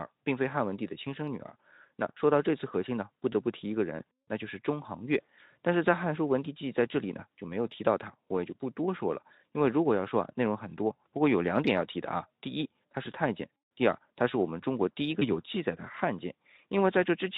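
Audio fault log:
4.23–4.27 s and 15.19–15.28 s, VoIP packet loss concealed by the speech codec: Speech drops out briefly, about 40 ms first, then 20 ms. The Speex decoder fills each gap by extending its last pitch and filter at falling gain. That gives a short buzzy or noisy smear that fades, and the voice stays weak just after.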